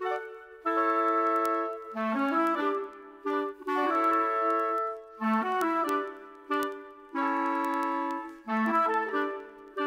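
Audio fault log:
0.16–9.86 s, word clock ticks: sharp ticks about ten times a second as single samples slip between unlocked clocks roughly 300 ppm apart; unlike random clicks, the spacing stays even.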